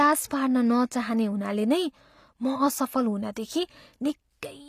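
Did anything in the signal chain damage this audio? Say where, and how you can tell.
Yes. Throughout the speech, s sounds come across gritty and plainly lispy, the treble metallic and not quite attached to the voice beneath it, with nothing above about 14.9 kHz. The codec stage is the likely cause: HE-AAC compression, whose replicated upper bands fit a low bitrate around 24 kbps.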